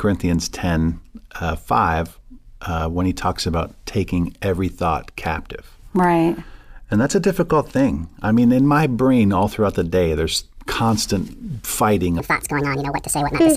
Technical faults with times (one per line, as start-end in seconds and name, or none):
12.20-13.56 section at the wrong speed